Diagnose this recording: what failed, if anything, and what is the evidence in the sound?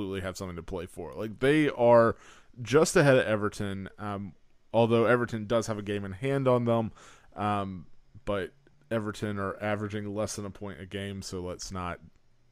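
Nothing in this speech recording points to a failure at any stage of the chain, and the signal holds steady in level and continuity throughout with no audible defect.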